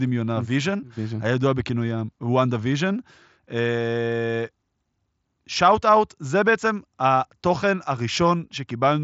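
No technical faults occur anywhere in this speech clip, which comes through a Bluetooth mSBC headset link with its band ending near 7.7 kHz.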